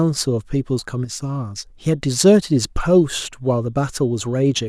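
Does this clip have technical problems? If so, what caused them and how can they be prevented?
Yes. From 1.05 to 1.20 s the speech abruptly sinks by about 6 dB for roughly 0.16 s, then snaps back to full level, a brief dip rather than a fade. The likely cause is one channel dropping out: with one side of the stereo pair lost, the mono sum carries only half of what both channels shared, and anything present only in the missing side vanishes. Secure cables and connectors, and monitor each input channel so a failing side is caught while recording.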